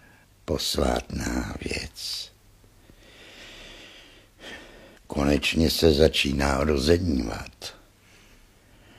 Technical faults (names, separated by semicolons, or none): none